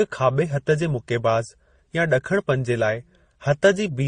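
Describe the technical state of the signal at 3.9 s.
At 3.9 s the speech shows transcoding between lossy codecs, present throughout, most likely from a low-rate MP3 pass re-encoded as Opus. Each codec's artefacts stack and are heard together. A spectrogram shows blotchy, patchy high bands with nothing above 20.1 kHz.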